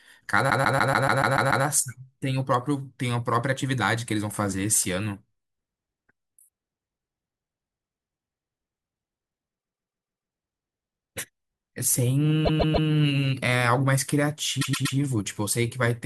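It's a speech clip with repeated frames, where a 144 ms chunk gets replayed as a stutter at 0.49–1.65 s, 9.59–10.31 s and 12.45–12.88 s, and a 120 ms chunk at 14.61–14.97 s.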